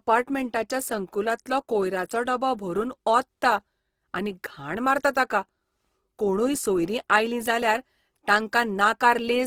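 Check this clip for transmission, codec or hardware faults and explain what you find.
One codec fault runs the full length of the speech. Opus compression, likely at a low bitrate near 16 kbps in music mode, leaves the audio rough and grainy. Starved bands are filled with folded or noisy content, so tones turn hissy while bandwidth stays wide, reaching about 20.4 kHz.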